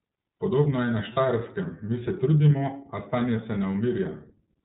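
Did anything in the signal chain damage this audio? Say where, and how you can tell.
Yes, at the codec stage, throughout the recording. The speech passes through the iLBC codec. Nothing reaches above 4 kHz, which gives the narrowband telephone sound. The voice is clear but plainly rough and slightly synthetic. That texture comes from the way iLBC codes each frame's excitation on its own, without using the previous frame. The damage heard here fits the 30 ms frame mode at roughly 13 kbps.

At the network stage there is a brief dropout from 1.14 to 1.18 s, heard as lost iLBC frames. For about 30 ms the decoder fills the hole by repeating the last pitch cycle with added noise, so the sound becomes a short held, faintly buzzy vowel rather than silence. The length points to a single lost packet. Each iLBC frame decodes independently, so the speech recovers cleanly as soon as the next frame arrives.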